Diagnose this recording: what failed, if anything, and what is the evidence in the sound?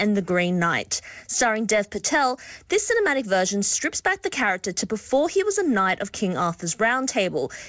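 Nothing in this speech recording points to a failure at any stage. It has passed through a call path whose coding leaves nothing above 8 kHz, which fits a wideband codec such as G.722 working as intended.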